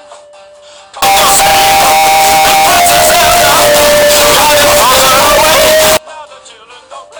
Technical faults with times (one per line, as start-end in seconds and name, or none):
1.02-5.97 signed and unsigned mixed up